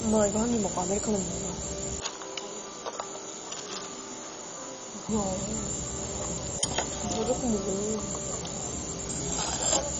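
Heavy coding at a very low bitrate, likely MPEG Layer II (MP2) compression at a rate that fits about 32 kbps, runs through the whole recording of everyday sound. With so few bits, the encoder switches off the upper sub-bands entirely, so nothing survives above about 10.1 kHz, and the remaining bands are quantised coarsely. The result is a dull, band-limited sound with a granular, gurgling roughness as bands drop in and out.

From 2.0 s to 5.09 s, the input switched to a poorer device, likely a different microphone or a headset's call profile taking over mid-recording. The change happens with no gap, and the band narrows further, cutting everything above 7 kHz, so the audio turns boxier and more muffled. The level falls by a few decibels, and a faint new noise floor sits well below the sound. The band up to about 10.1 kHz returns after 5.09 s.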